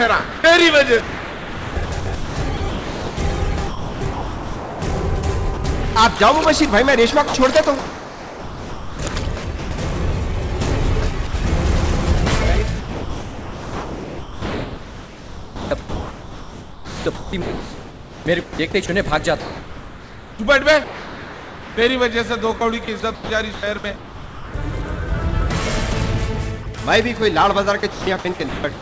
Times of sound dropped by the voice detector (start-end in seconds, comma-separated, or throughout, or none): 11.27-11.33